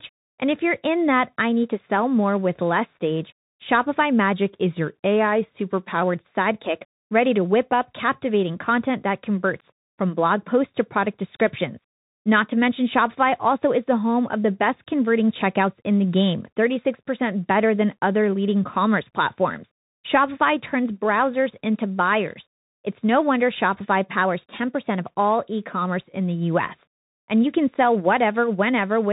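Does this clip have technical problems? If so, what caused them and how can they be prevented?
Yes. The whole clip is band-limited with nothing above 3.8 kHz and carries plainly audible damage from the Bluetooth CVSD headset codec, which fits a one-bit 64 kbit/s stream. Each bit only nudges the waveform up or down by an adaptive step, so fast, loud high content outruns the step and turns scratchy, over a granular hiss. That grainy texture sets it apart from the smoother muffling of a plain low-pass filter. Using a wideband Bluetooth profile such as mSBC or LC3, or a wired microphone, prevents it.

From 4.33 to 6.02 s the audio plays about 6.1% slow and drops 108 cents, roughly a semitone. From 24.16 to 25.06 s it plays about 6.1% fast and rises 102 cents. The likely cause is a drift correction step, where clock-matching software changed the playback rate abruptly to refill or drain its buffer. 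Because speed and pitch shift together and switch in sudden steps, it differs from gradual wow or a pitch-only shift. Capping rate corrections far below 1%, or resampling continuously, prevents it.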